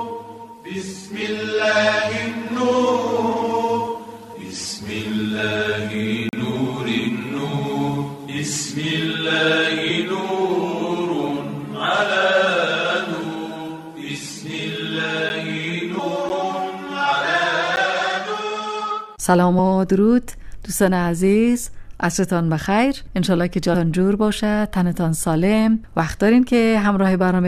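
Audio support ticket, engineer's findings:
Brief hole at 6.29 to 6.33 s (40 ms gap), and single ticks at 15.29, 16.29 and 17.76 s (10 ms each). Block of digital silence: the playback or processing stage zeroed whole buffers, with an abrupt cut to silence and back.

Audio jumping ahead at 9.89 s (about 150 ms lost), 13.23 s (about 50 ms), 15.98 s (about 700 ms), 19.58 s (about 50 ms) and 23.73 s (about 200 ms). Compressed frames skipped: the decoder dropped missing or damaged frames in 23.2 ms steps.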